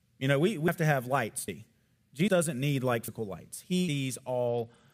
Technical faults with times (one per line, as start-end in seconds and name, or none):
0.68 audio missing between chunks
1.48 audio missing between chunks
2.28 audio missing between chunks
3.08 audio missing between chunks
3.88 audio missing between chunks
4.48-4.93 Bluetooth SBC bit pool drop